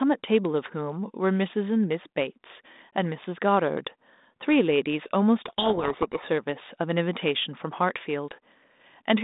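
Codec payload misread from 5.46 to 6.26 s: the decoder takes G.726 code words in the wrong bit order, burying the speech in harsh distortion.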